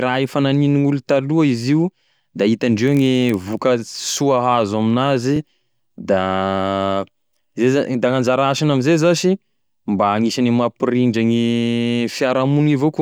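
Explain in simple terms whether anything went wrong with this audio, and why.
Two things went wrong in this speech recording.

From 2.81 to 3.61 s there is a block size mismatch (padded). One stage handed over blocks shorter than the next stage expected, and the gaps were filled with silence. That produces a low buzz at about 43 Hz, which fits a 1024-sample read size, while the speech runs at almost exactly its normal speed.

At 5.36 to 5.39 s there is a repeated buffer. Fresh audio arrived late, so the player replayed its last 23 ms chunk once more, which fits a 1024-sample buffer. You hear a quick stutter or click at the hard join, with nothing actually missing.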